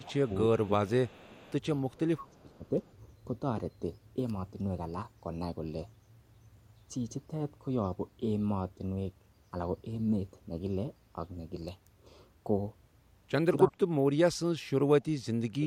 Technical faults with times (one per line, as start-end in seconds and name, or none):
0.00-0.31 speech suppressed in double talk
0.24-0.36 echo leak
0.64-1.46 speech suppressed in double talk
1.16-1.53 echo leak
1.95-2.65 speech suppressed in double talk
2.87-2.92 echo leak
13.67-15.07 speech suppressed in double talk
15.35-15.66 speech suppressed in double talk